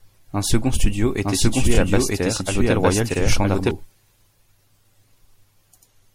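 Speech recording with three kinds of technical fault. MP3 compression runs throughout: weak detail flickers frame to frame, giving a plainly audible watery, smeared quality that likely comes from an encoder running at a low bitrate, around 64 kbps. A doubled audio track runs from 1.23 s to 3.71 s, starting just after "second studio". A dry, full-band second copy at roughly the same level trails about a second behind, then starts and stops abruptly, as a slower capture path or misaligned edit would. Repeated frames occur at 1.74 s, where a 26 ms block plays twice, and at 3.12 s, where a 52 ms block plays twice. Each produces a brief stutter and lengthens the audio by the repeated time.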